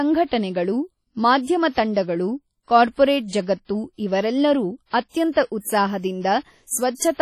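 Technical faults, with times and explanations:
Throughout, WMA compression: the speech rings and sounds washy, with a hiss that swells and fades alongside the signal, and nothing reaches above 17.6 kHz. The likely cause is heavy transform coding at a low bitrate, consistent with 32 kbps, spreading quantisation noise across long blocks.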